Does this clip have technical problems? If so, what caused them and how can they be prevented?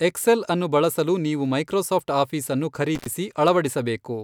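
Yes. An intermittent contact, a loose cable or plug opening briefly, drops the speech out with crackle at the edges from 2.95 to 3.07 s, right after "ಬಳಸಲು ನೀವು ಮೈಕ್ರೋಸಾಫ್ಟ್ ಆಫೀಸ್ಅನ್ನು", with the line open for about 72 ms. Seating connectors firmly, using locking plugs, and replacing worn cables prevents it.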